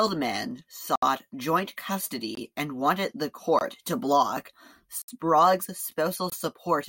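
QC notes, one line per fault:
0.96–1.02 s, block of digital silence: the speech drops to zero for about 69 ms with hard edges, heard as a short hole.
2.35 s, block of digital silence: a 21 ms run of zeros, which fits a missed 1024-sample output buffer, cuts in without a fade.
3.59 s, block of digital silence: another 21 ms zeroed block of the same size; the drop and return are abrupt, with no fade.
5.02–5.08 s, block of digital silence: 64 ms of zeros replace the speech, opening an audible gap where the signal cuts out and back.
6.30 s, block of digital silence: a third 21 ms block, again consistent with a 1024-sample buffer not filled in time.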